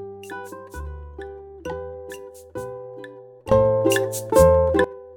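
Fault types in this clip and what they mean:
Sudden gain jump: from 3.52 to 4.84 s sound and background noise leap up together by about 18 dB, likely a gain setting applied without ramping.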